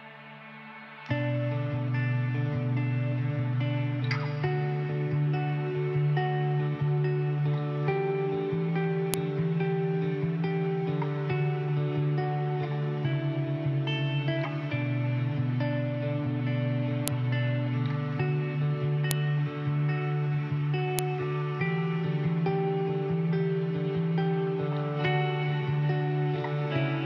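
At 9.14, 17.08, 19.11 and 20.99 s, a file header played as audio snaps sharply where joined pieces begin. Each shows as a lone waveform spike and a thin full-band spectrogram line.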